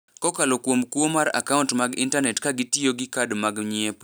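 A short speech recording with no technical faults to report.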